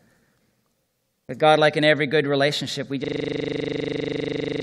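At 3.04 s the speech stops moving forward and a system hang loop takes over, running to the end of the clip. The computer or driver froze, but the sound hardware kept playing the same stretch of its ring buffer. That stretch is 40 ms long. It repeats exactly, about 40 times, at a rate of 25 Hz. The result is a rapid, rattling stutter with a buzzy edge, which fits a frozen buffer of that size.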